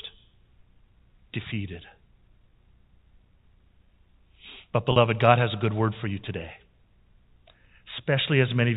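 At 4.92 s the speech hits packet loss with pitch repetition: about 40 ms, which fits two lost packets, is bridged by repeating the last pitch period. It sounds like a briefly held, buzzy tone. A spectrogram shows frozen harmonics, and the waveform shows identical repeating cycles before normal speech resumes by 4.96 s.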